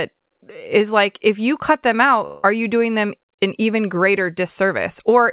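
Speech, carried over a call path that leaves nothing above 4 kHz. From 2.26 to 2.45 s the sound smears into a fading buzz or hiss, then resumes with a piece gone. This is likely a long network dropout.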